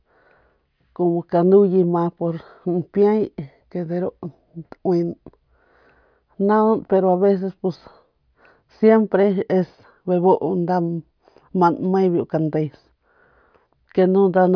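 No technical faults can be heard anywhere in the speech. Nothing in the recording calls for a time or a cause to be pointed out.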